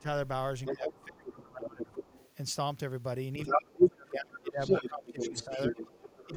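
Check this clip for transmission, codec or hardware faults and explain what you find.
Two echo-cancellation faults are audible in this speech, both pointing to trouble when both ends of the call talk at once.

Speech suppressed in double talk occurs at 0.00 to 0.06 s, 0.69 to 1.94 s, 3.47 to 5.78 s and 6.26 to 6.34 s. The near-end speech dips by about 15 dB in the brief ends and about 20 dB in the long middle stretches. The likely cause is an echo canceller that could not tell its own talker from loudspeaker echo and attenuated everything.

The other side's voice leaking through is heard from 0.65 to 2.32 s at about 5 dB below the main speech, from 3.38 to 3.88 s at about 10 dB above it, and from 4.37 s to the end at about equal level. A second voice sits in the pickup, likely loudspeaker playback that the echo canceller failed to remove. It overlaps the suppressed passages, so the main talker drops while the far-end voice stays present.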